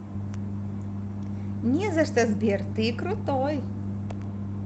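No technical faults are audible in this speech; it has passed through a WebRTC call path with Opus coding that keeps the content below 8 kHz, which fits a setting of around 32 kbps.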